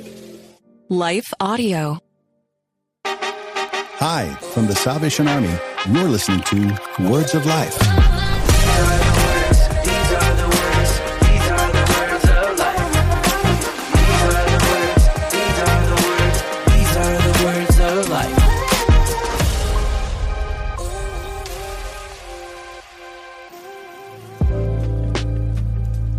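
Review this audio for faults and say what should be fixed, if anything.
The whole clip sounds dull and gurgly, with grainy distortion on top, which is likely MP2 compression. At a rate that sounds like around 80 kbps, the coder keeps switching off upper sub-bands and quantising the rest coarsely. To avoid it, give the encoder a higher bitrate or use a more efficient codec.

From 24.91 to 24.96 s there are a few short watery blips, classic DAB burbling. A few bit errors at a very low rate slipped past error correction and put short blips of noise into individual sub-bands across two frames. Better reception or stronger error protection on the multiplex would stop it.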